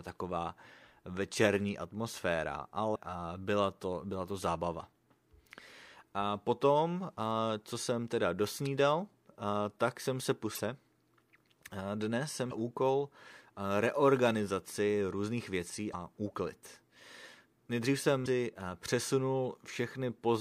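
Five brief glitches break into this speech clip, each lasting about 45 ms: at 2.92–2.96 s, right after "taková večerní atmosféra" and before "byla to byla to"; at 10.54–10.59 s, after "tak jsem se"; at 12.48–12.52 s; at 15.90–15.94 s, after "reorganizaci různých věcí"; and at 18.22–18.27 s. These are damaged data in a compressed stream: corrupted bytes make the decoder misread frames and lose sync until it finds the next valid frame header.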